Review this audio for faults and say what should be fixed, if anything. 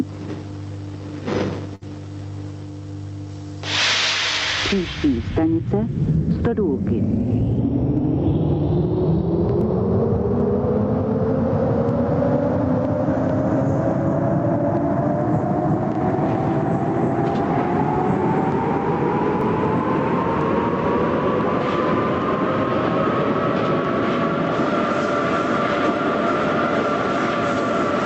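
Gain pumping runs through the whole clip, a swing of about 15 dB, with loud and soft passages squeezed together. This is likely input gain set far too high, with a fast limiter clamping every peak. Lower the input gain so the limiter rarely engages.

At 1.75 s there is a short stall from a late packet. A packet arrived late, the jitter buffer emptied, and the receiver held the last sound for 61 ms until it came, then resumed from the same point without losing anything. Playback runs 61 ms later from there on. A larger or more adaptive jitter buffer would absorb this.

Audio missing between chunks occurs at 9.61 s and 19.41 s, roughly a fifth of a second each time, with the two sides butted together. The spacing fits a recorder working in 10-second chunks that likely drops audio at each handover. Buffer continuously across chunk boundaries so no samples are lost.

The call path through the Opus codec at 32 kbps, with audio limited to 8 kHz, adds its usual coding noise but is not at fault.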